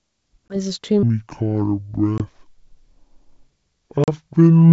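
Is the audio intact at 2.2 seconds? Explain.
No. Two faults overlap there. A packet loss on an ADPCM call blanks the audio from 2.18 to 2.23 s with a hard-edged gap of about 20 ms, which fits a single lost packet. The decoder's adaptive predictor and step size then lose sync with the sender's, so the sound comes back slightly distorted before it settles.

That moment also sits inside a section at the wrong speed, running from 1.03 s to the end. The audio plays at 0.6 times its recorded speed, dropping pitch by roughly ten semitones so it sounds deep and slow, likely from playback against the wrong clock.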